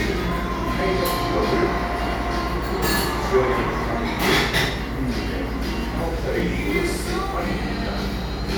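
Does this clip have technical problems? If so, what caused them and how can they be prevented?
No, this recording of sounds has no audible technical problems. There is nothing here that needs to be prevented.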